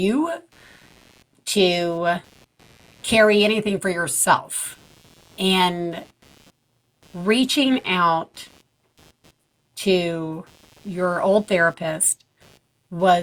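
A low buzzing chirp runs underneath the speech from start to finish, pulsing at roughly 150 times a second and sitting far below the voice. This is computer activity noise: processor or peripheral load shifts the shared ground, so the buzz tracks machine activity rather than the speech.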